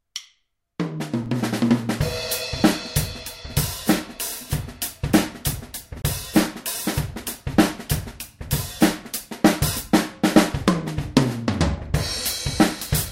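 At 1.26 s there is a block of digital silence lasting 5.8 ms. The sound briefly cuts out and returns with no fade, so it is heard as a sharp tick. The length fits a 256-sample buffer that was not filled in time. From 6.02 to 6.04 s a second block of digital silence runs for 23 ms. This one is long enough to be heard as a short hole. It fits a 1024-sample buffer.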